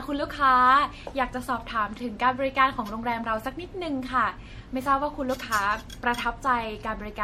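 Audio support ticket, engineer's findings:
Generation loss throughout speech: swirly, hollow, smeared attacks. Spectrogram shows hard ceiling near 16.4 kHz, patchy holes. Likely about five MP3 passes, fits 64 kbit/s.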